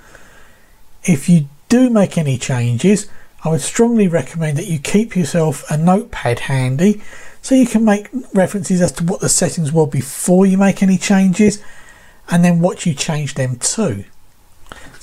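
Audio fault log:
8.87 s and 11.48 s, lost LE Audio frames: two 10 ms blips, each fitting one dropped frame, where the LC3 decoder reused the last spectrum with random signs, giving a quick noisy smear.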